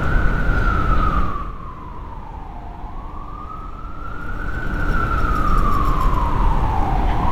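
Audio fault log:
No faults are heard in this audio. Where the level rises or falls, it moves gradually, as if eased by a fader.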